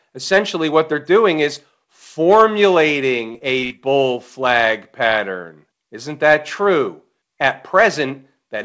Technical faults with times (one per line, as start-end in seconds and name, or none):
3.32-3.84 repeated packet loss (robotic sound)